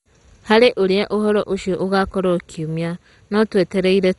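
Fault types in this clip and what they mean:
MP2 compression: The speech sounds dull and gurgly, with nothing above 11.2 kHz and a grainy, swirling texture, likely from MP2 coding at a starved rate, around 56 kbps. Too few bits means upper sub-bands switch off and the rest get coarsely quantised.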